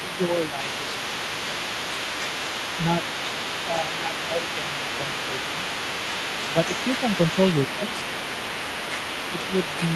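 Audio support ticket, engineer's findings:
Other side's voice leaking through, 0–10 s. Far-end talker audible under near-end speech throughout, roughly 10 dB down. Likely residual echo: loudspeaker playback reaching the mic, not fully removed by the echo canceller.

Speech suppressed in double talk at 0.1–0.87 s, 3.67–4.66 s, 4.98–5.05 s, 5.59–5.74 s and 6.54–6.61 s. Near-end level dips about 5 dB, near 10 dB at 3.67–4.66 s, while both sides talk. Likely echo canceller attenuating the whole signal when it can't separate talker from echo.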